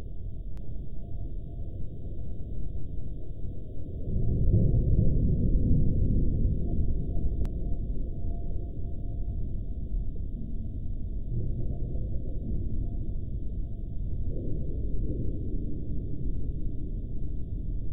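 From 0.57 to 7.45 s every sound repeats about half a second later, somewhat quieter and dry: a doubled audio track, likely from a second, out-of-step capture.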